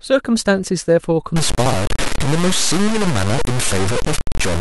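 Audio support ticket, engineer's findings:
Grainy, gritty distortion on the speech from 1.36 s to the end, roughly as loud as the speech itself, harshest on quiet passages, with low-level parts sputtering or dropping out. Likely low bit depth without dither: samples truncated to about 3 bits, so the rounding error tracks the signal instead of sitting as steady hiss.

Jumbled moment at 1.66 to 1.74 s. Chunks out of order, probably in the buffering or write path: one 20 ms chunk plays three chunks late, after audio that should follow it. Nothing missing, but the reordering leaves three hard joins and a brief garble in the speech.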